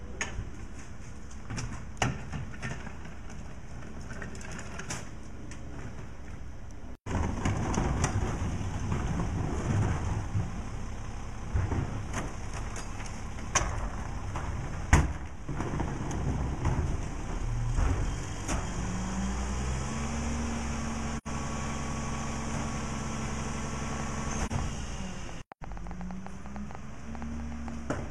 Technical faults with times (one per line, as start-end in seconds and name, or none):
21.17-21.28 AAC frame loss with muting
23.93-27.91 train of clicks
24.46-24.52 AAC frame loss with muting